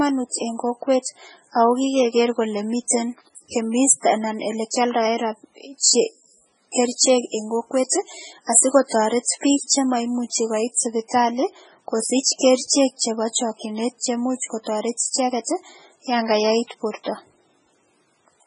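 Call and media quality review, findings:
MP3 compression, throughout speech: heavy watery, swirly texture, metallic chirps on s sounds, smeared consonant attacks, nothing above 10.5 kHz. Likely a starved MP3 encoder, consistent with about 16 kbps. Fixed treble cutoff, weak spectral lines toggling frame to frame.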